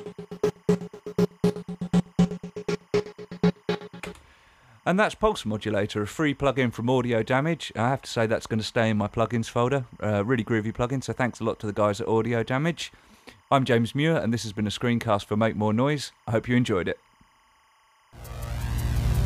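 From start to finish there's timecode bleed: linear timecode leaking in from a nearby track or cable. Its square wave flips between roughly 1 kHz and 2 kHz, giving a steady chirping warble around 35 dB under the sound, and its rhythm fits 25-frame code.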